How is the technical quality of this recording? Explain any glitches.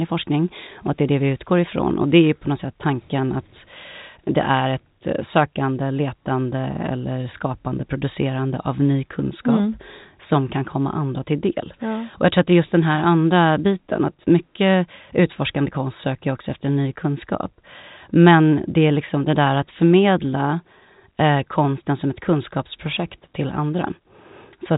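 No glitches can be heard anywhere in the recording. The speech arrives through G.711 telephone coding, which gives it the narrow sound of a phone line, with nothing above 3.8 kHz.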